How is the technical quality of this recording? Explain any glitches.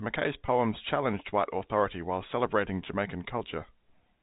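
The recording carries one glitch, a brief packet loss with pitch repetition from 0.46 to 0.48 s, just before "challenged white authority while", heard through G.711 telephone coding with nothing passing above 4 kHz.

About 20 ms went missing, which fits a single lost packet. The receiver filled it by repeating the last pitch period, so it sounds like a tiny held buzz rather than a silent gap or click, as a plain dropout would produce.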